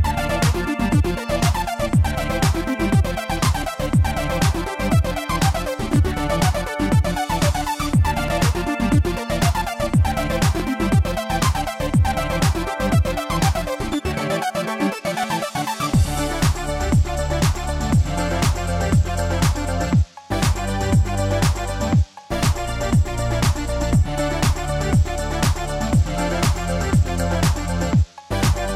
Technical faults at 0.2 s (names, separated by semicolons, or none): none